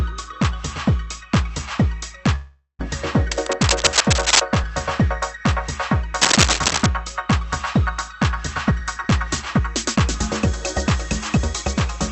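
At 2.35 to 2.81 s, packets were likely held up and the jitter buffer ran empty. This call audio freeze stretches the last sound into a fading buzz with a short silence, then resumes where it stopped. From 3.31 to 4.40 s, and again from 6.21 to 6.86 s, a worn cable or contact being moved likely causes cable scratch noise. Dense, uneven scratching rides over the sound, at about the same level the first time and somewhat louder the second. At 8.71 to 9.08 s and 9.59 to 9.97 s, a jitter buffer speed-up trims an overfull buffer by cutting short pitch periods, roughly 40 ms each time. The sound hurries to 110% and then 108% speed without any change in pitch, within a band that tops out near 8 kHz.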